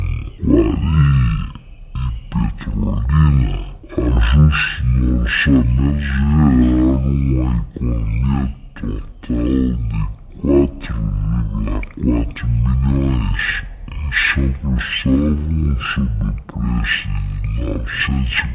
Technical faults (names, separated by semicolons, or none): wrong sample rate